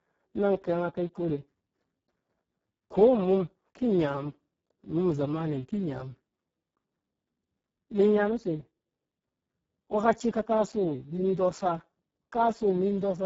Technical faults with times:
0.00-13.25 Speex codec

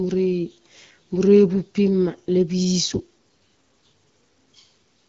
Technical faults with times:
none

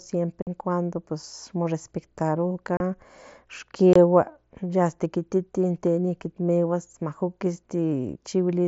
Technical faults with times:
0.42-0.47 unconcealed Bluetooth headset packet loss
2.77-2.80 unconcealed Bluetooth headset packet loss
3.93-3.96 unconcealed Bluetooth headset packet loss

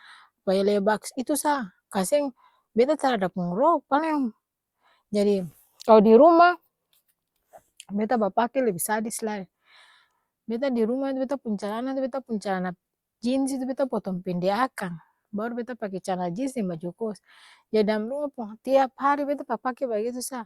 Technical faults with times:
1.59 dropped samples
16.75 dropped samples

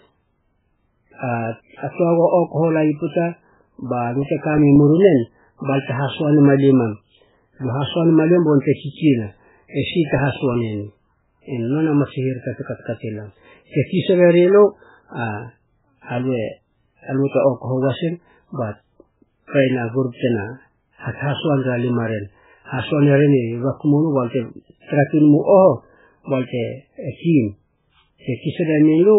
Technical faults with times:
0.00-29.18 MP3 compression
4.04-5.29 CD scratch ticks
9.47-11.25 CD scratch ticks

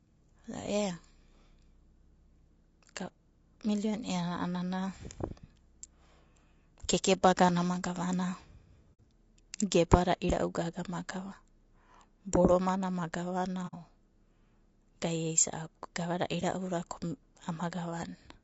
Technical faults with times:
0.00-18.44 low-delay AAC compression
8.94-8.99 AAC frame loss with muting
13.67-13.74 AAC frame loss with muting

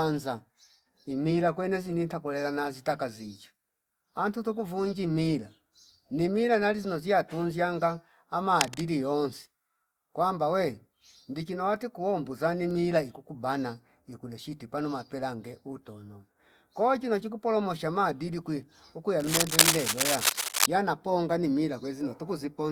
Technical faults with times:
8.50-8.81 cable scratch noise
19.20-20.66 cable scratch noise

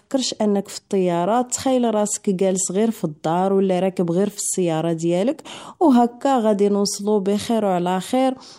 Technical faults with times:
5.44-5.70 sudden gain jump

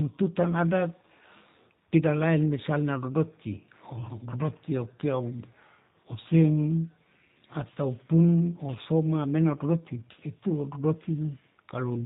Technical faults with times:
0.00-12.05 G.729 codec

